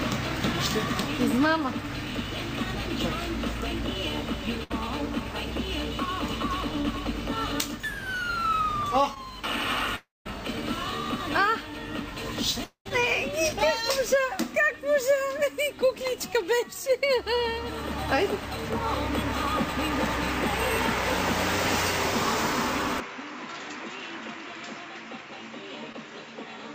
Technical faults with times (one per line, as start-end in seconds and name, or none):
4.63-4.72 burst of packet loss
6.82-6.86 short concealed packet loss
9.14-9.18 short concealed packet loss
9.96-10.27 long network dropout
12.64-12.87 long network dropout
23.00-26.75 input switched to a poorer device
25.92-25.95 short concealed packet loss